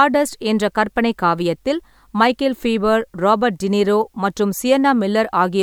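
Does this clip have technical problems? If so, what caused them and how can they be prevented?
No, nothing in this speech clip comes across as a technical problem, so there's no cause to track down and nothing that needs preventing.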